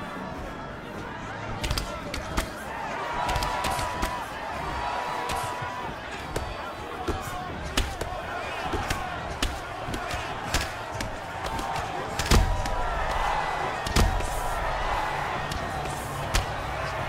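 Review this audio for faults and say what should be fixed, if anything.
There's a doubled audio track for the whole clip: a second, equally loud copy trails about a second and a half behind, likely a slower capture path recorded alongside. Route each source through a single capture path and mute any duplicate monitoring feed before recording.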